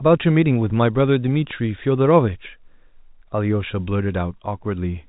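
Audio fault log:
No faults turn up here, just the usual G.711 telephone coding at work, so nothing comes through above 3.8 kHz, the way it does on a phone line.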